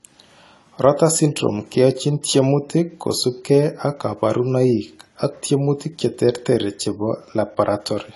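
Throughout the speech, the sound is dull and smeared, with a warbling, fizzy edge on sibilants and nothing above 11.5 kHz. The likely cause is AAC compression, with quantisation heavy enough to point to a bitrate around 32 kbps, trimming the top and thinning detail.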